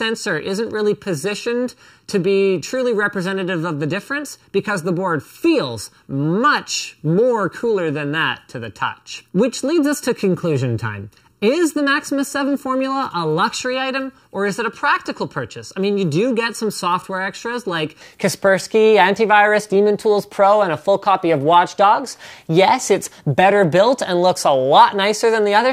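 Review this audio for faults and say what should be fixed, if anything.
From 0.0 to 18.01 s the sound is hollow and phasey, the result of a channel delay (comb filtering). One channel runs under a millisecond behind the other, so summing to mono cancels shared content at evenly spaced frequencies starting near 700 Hz. A spectrogram shows fixed dark horizontal bands. Align the channels to the sample, or check mono compatibility, before summing.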